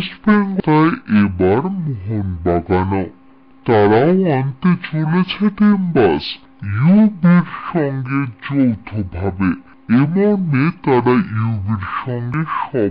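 The sound runs at half speed and an octave low from start to end, a drop of 12 semitones. This is stereo read as mono. The left and right samples sit interleaved in the stream, but they are played one after another as a single channel. Each stereo frame then lasts twice as long, which halves both speed and pitch. A faint mirrored copy of the sound also shows up in the upper half of the spectrum.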